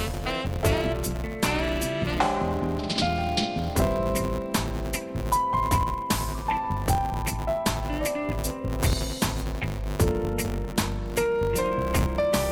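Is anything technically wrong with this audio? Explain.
Yes. Throughout the audio there is a filter restarted on every block: the processing resets its internal state at each block boundary, so every block starts as if from silence and opens with a small transient. These transients repeat about 100 times a second, which points to blocks roughly 10 ms long, and they are heard as a 100 Hz buzz that rises and falls with the signal's level.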